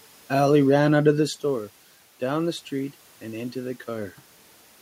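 Listening through the speech, nothing stood out beyond the room's own background noise and the level shifts near 1 s and 4 s where the talker moves relative to the microphone.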